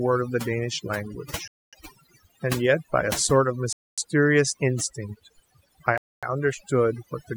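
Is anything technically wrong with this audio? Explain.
Yes, there are two problems in this speech clip.

Throughout, the background drops to near-silent pauses full of twinkling specks. This is overdone noise removal: an overly aggressive reduction pulls individual frequency bands down whenever they approach the estimated noise level, taking quieter voice detail with them.

At 1.48 to 1.73 s, 3.73 to 3.98 s and 5.98 to 6.23 s, the sound drops into 250 ms holes. This is a gap between chunks: the audio arrives in 2 s pieces with silence inserted at each join.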